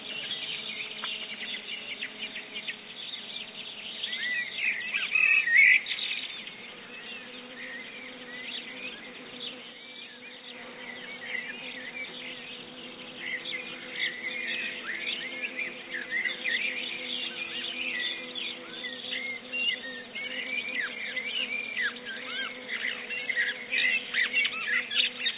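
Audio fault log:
9.27–10.79 s: loudspeaker feedback squeal. A pure tone at 4.4 kHz swells over roughly half a second to about 15 dB above the surrounding sound, then stops. A microphone is picking up its own loudspeaker, and the loop gain exceeds unity at that one frequency, so the tone keeps feeding itself. On a spectrogram it is a single bright horizontal line sitting in the otherwise empty band over 4 kHz left by the call path. In the waveform the envelope swells, then ends.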